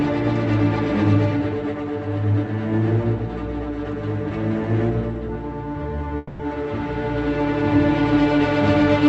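A long network dropout runs from 6.17 to 6.41 s. For about a quarter of a second, the final sound before the gap is stretched into a buzzy, hissing continuation that fades but never reaches silence. When the audio returns at 6.41 s, roughly 220 ms of material is simply gone. The likely cause is a run of lost packets that the receiver papered over by extending what it last had, so the missing stretch was never recovered.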